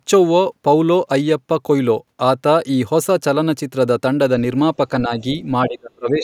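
A speech clip with speech suppressed in double talk. At 5.05 to 5.23 s the voice dips slightly. From 5.63 s to the end it drops deeply, nearly cutting out. An echo canceller likely mistook the talker for echo while both sides spoke.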